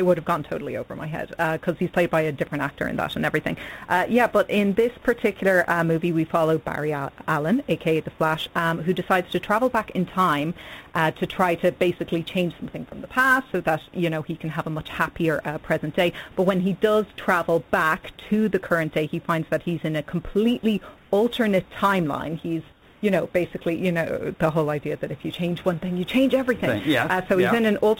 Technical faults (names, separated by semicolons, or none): sample clock jitter; sound dropped by the voice detector; comfort noise in place of the background